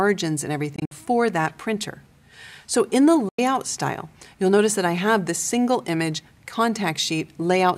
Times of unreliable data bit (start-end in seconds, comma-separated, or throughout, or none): none